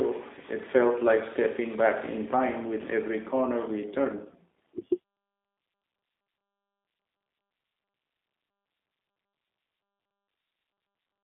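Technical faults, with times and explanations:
Throughout, G.729 codec: the speech occupies only about 250 Hz to 3.7 kHz, so it sounds thin and boxy, with sibilants dulled. The coding damage is plainly audible as a rough, slightly buzzy and synthetic texture. Each 10 ms frame is rebuilt from a vocal tract filter, a pitch predictor and a few sparse pulses rather than the actual waveform. This matches a low-rate speech coder of about 8 kbit/s of the G.729A type.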